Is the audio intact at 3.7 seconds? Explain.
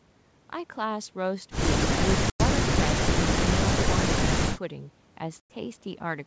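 Yes, the speech at 3.7 seconds plays through intact, with no fault at that moment.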